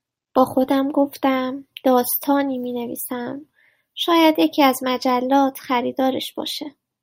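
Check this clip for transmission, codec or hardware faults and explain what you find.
No faults turn up anywhere in the clip.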